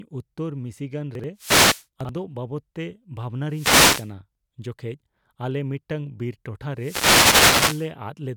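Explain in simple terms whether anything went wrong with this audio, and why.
Two kinds of problem can be heard in this speech recording.

Twice, at 1.15 to 1.24 s and again at 2.01 to 2.09 s, the sound briefly jumbles, with a moment that seems to stutter out of sequence. These are chunks out of order: the audio travels in slices of about 43 ms, and one slice arrived late, so it played right after its neighbour instead of before it. Nothing goes missing, but the swapped slices leave hard joins.

Three times the speech is washed over by a hiss or swish of static: from 1.36 to 1.85 s, from 3.48 to 4.11 s, and the longest from 6.76 to 7.91 s. Each is a wireless microphone noise hit. The radio link between the microphone and its receiver weakened for a moment, as reflected signals cancelled each other out, and the receiver's own noise rose up.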